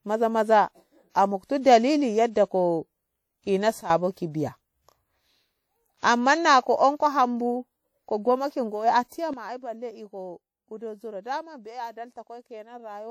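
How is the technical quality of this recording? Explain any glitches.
The recording has plainly audible codec damage, two pre-echo smears and two abrupt level drops.

WMA compression runs throughout, likely at a low bitrate around 48 kbps. Coarse block quantisation makes the audio sound ringing and washy. On a spectrogram, detail thins into blurred patches below a cutoff near 20.1 kHz.

Pre-echo appears at 1.61 s and 5.98 s, smearing about 42 ms and 53 ms respectively. Quantisation noise spreads across each block into the quiet before an attack. You hear a brief hiss ahead of the onset, and a spectrogram shows a faint vertical haze leading it.

Sudden gain jumps occur at 3.81 s, dropping about 13 dB until 3.90 s, and at 9.33 s, dropping about 12 dB through the end. These are likely caused by a gain change applied without a ramp. Speech and background fall together, and the waveform envelope steps down abruptly.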